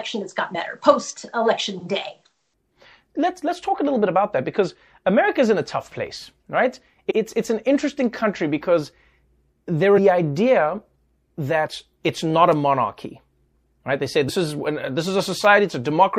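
MP3 compression runs through the whole speech clip. The sound has a watery, swirly quality, with sibilants turning chirpy and metallic and consonant attacks smeared. The likely cause is an MP3 encoder starved of bits, at a rate that points to around 64 kbps. With too few bits, it lets weaker frequency lines flicker on and off from frame to frame.

Compressed frames are skipped at 0.54, 7.1, 9.97, 11.67 and 14.28 seconds. Each time, whole blocks of the compressed stream go unplayed, so the audio lurches forward. The jumps are about 70, 100, 150, 50 and 50 ms, each a small multiple of a frame of about 26 ms, which fits MP3 framing. Because neighbouring frames overlap, every join is a brief smeared blip rather than a sharp click.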